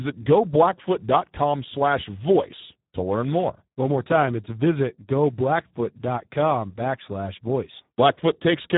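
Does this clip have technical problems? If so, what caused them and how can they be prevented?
Yes. Heavy Speex codec damage throughout leaves the speech noisy and hoarse, which fits an 8 kbps setting; a spectrogram shows nothing above 3.8 kHz. Prevent it by using a higher Speex quality setting or a modern codec such as Opus.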